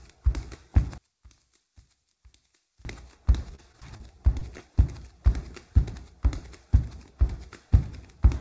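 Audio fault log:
0.98–2.85 s, one channel inverted: In mono the sound drops by about 32 dB. The centre content almost disappears, leaving only a faint residue of what differs between left and right. The likely cause is reversed polarity on one stereo channel, so the shared content cancels when the channels are summed. Unlike a dropout or mute, the residue stays continuous and in time, and it returns to full level at 2.85 s.
3.50–4.01 s, repeated packet loss (robotic sound): Over about half a second the sound turns choppy. A string of holes, the longest about 29 ms, are each patched by stretching the preceding sound. Around 94 ms of the stretch is synthesized, roughly a fifth of it. The holes come close together, so each patch is soon followed by the next. That produces a robotic texture rather than one isolated blip, which is what separates it from the single concealments that follow.
4.39–4.43 s and 4.57–4.61 s, short concealed packet loss: Two separate brief smears, each covering about 20 ms of missing audio. 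The receiver bridged each hole by carrying the last sound forward and then blended back into the real signal. Each one is a single, isolated event. That sets them apart from the sustained robotic run just before, and a transient can be slightly softened or lost inside each patch. Through all of this the G.722 call path leaves nothing above 8 kHz.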